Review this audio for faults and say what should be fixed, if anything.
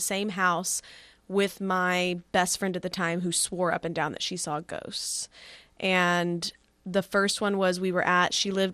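MP2 compression damage runs through the whole speech clip. The top end sounds dull. Upper sub-bands drop in and out, so the high frequencies flicker. The bands that remain are coarsely quantised, which adds a gurgling, granular roughness throughout. The cause is likely an MPEG Layer II encode starved of bits, which fits a rate around 80 kbps. To prevent it, re-encode from the original source at a higher bitrate or with a more efficient codec.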